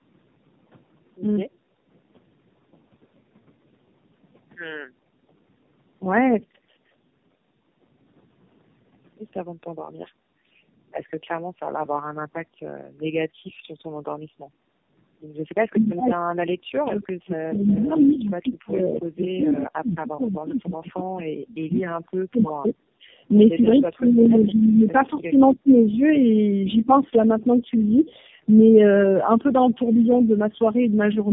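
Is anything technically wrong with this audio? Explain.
Yes. The speech has four kinds of fault.

Throughout, there is tandem speech coding. The sound has the roughness and warble of several narrowband speech codecs in a row, about three. Each coder re-encodes the last one's damaged output. Nothing reaches above 3.6 kHz, so it sounds muffled.

From 19.43 to 19.48 s there is a brief echo leak. A faint copy of the speech returns about 236 ms late, roughly 25 dB down. It is a scrap that was likely missed by a far-end echo canceller and sent back.

There are three bursts of speech suppressed in double talk: 21.93 to 22.74 s, 23.61 to 24.87 s, and 25.10 to 25.76 s. The speech dips and breaks up, by up to about 35, 30 and 20 dB in turn. The likely cause is an echo canceller that turned down both talkers while they overlapped.

From 23.02 to 23.07 s the background is gated by the echo canceller. 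The room sound drops by about 9 dB for a moment, then returns. The canceller pulled the microphone down while its loudspeaker played.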